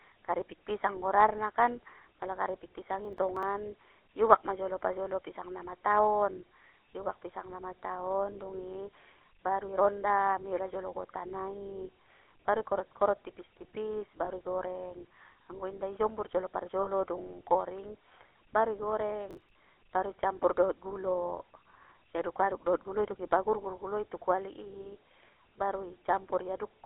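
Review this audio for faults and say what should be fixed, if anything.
GSM full-rate codec damage runs through the whole recording. The speech is confined to about 300 Hz to 3.4 kHz and has a buzzy, gravelly grain from pulse-driven vocal-tract modelling, consistent with 13 kbps full-rate coding. Prevent it by carrying the call over a wideband, higher-bitrate codec.

Processor overload crackle occurs from 3.05 to 3.43 s and from 19.31 to 19.50 s. It is gritty tearing where audio buffers of around 10 ms were skipped as the processor fell behind, several in a row in the first burst and over a dozen in the second. Prevent it by reducing processing load or enlarging the buffer.

Lost GSM frames occur at 14.25 to 14.29 s and 16.83 to 16.89 s. Each is heard as a brief, rough metallic hold where the decoder repeated the last good frame's settings, and the gaps fit one and two missing 20 ms frames. 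Prevent them by improving the radio link or strengthening error protection.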